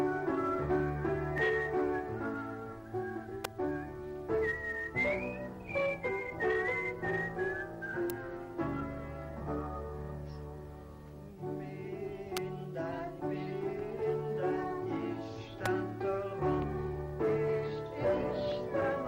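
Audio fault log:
3.44, 8.10, 12.37 and 15.66 s: electrical switching spike. Four isolated sharp snaps, each lasting only milliseconds and laid over the sound, peaking at about -15 dBFS, with the one at 8.10 s louder at about -10 dBFS. The likely cause is a nearby switch or motor arcing, with the audio line picking up the discharge.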